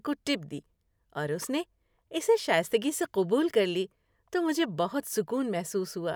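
No technical faults can be heard anywhere in the recording.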